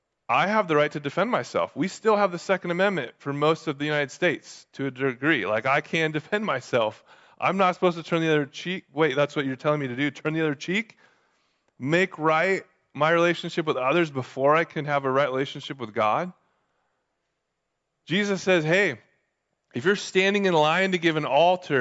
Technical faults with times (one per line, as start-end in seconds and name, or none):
none